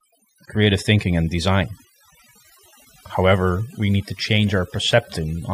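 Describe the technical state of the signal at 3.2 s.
At 3.2 s the background drops and breaks up into twinkling, warbling specks. This is overdone noise removal, present throughout the clip: an over-aggressive noise reducer shuts individual frequency bands down wherever they resemble its noise estimate, stripping quieter parts of the speech along with the noise.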